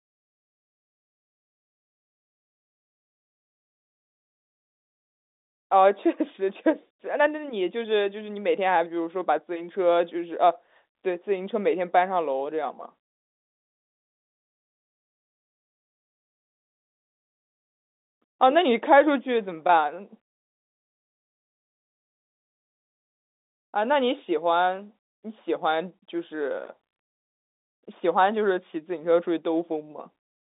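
No technical faults can be heard anywhere in this speech recording. The G.711 telephone coding holds the sound to a narrow telephone band of roughly 250 Hz to 3.7 kHz, giving the familiar thin, boxy quality of a phone line.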